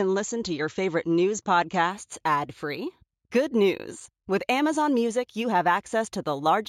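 From 1.90 s, just after "to your favorite news", until the end, the speech shows imaging from linear upsampling. The sound points to 16 kHz material raised to 44.1 kHz by straight-line interpolation between samples, which filters poorly. The upper band is dulled, and a mirrored copy of the spectrum sits between 8 kHz and 16 kHz, roughly 30 dB below the signal, heard as a faint metallic shimmer on sibilants.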